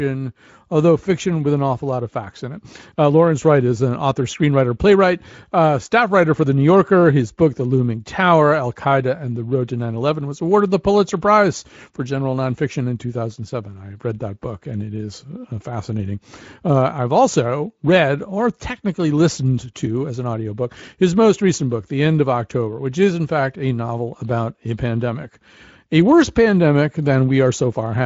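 The clip is speech, and there is nothing technically wrong with it.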